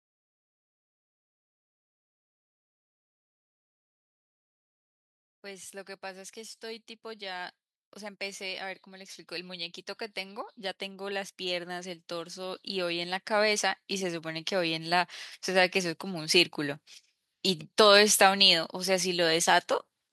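An automatic gain rising fault affects this speech recording: the gain control judged the input too quiet and kept pushing its level up from 6.01 s to 16.87 s, adding about 19 dB in total. Because the boost acts on the whole signal, the voice and the background noise swell together over those ten or so seconds, so the recording grows steadily louder and the background rises alongside the speech.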